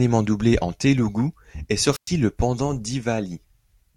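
From 1.91 to 2.09 s, after "doublé en télougou est", static swells into roughly 110 ms of near silence before "le pendant": a wireless microphone squelch dropout, where fading radio signal triggered receiver muting.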